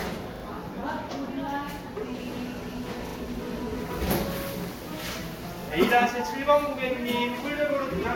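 Throughout the clip there is generation loss. The sound is swirly, smeared and hollow, with blurred attacks and nothing above 16.6 kHz. This likely comes from a few rounds of lossy re-encoding, fitting Vorbis at about 62 kbit/s. Each pass added fresh quantisation noise.

At 0.36 s, 3.08 s and 5.64 s, a repeated buffer causes short stutters. New audio arrived late, so one piece replayed with hard joins. It sounds twice more at the first two points and once more at the third. The chunk length fits a 40 ms buffer.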